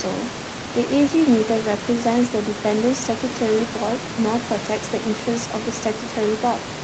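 Nothing stood out on listening to this speech recording.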